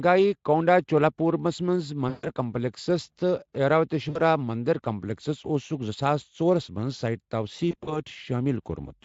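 At 2.09 s the speech drops into VoIP packet loss concealed by the speech codec: about 140 ms of audio goes missing and the decoder keeps extrapolating from its last pitch and filter, so the sound smears into a buzzy tone or a fading coloured noise until 2.31 s. A shorter 60 ms gap does the same at 4.09 to 4.21 s. From 7.71 to 8.00 s the losses are scattered, runs of up to 40 ms, giving a weakened stretch under the light Speex coding.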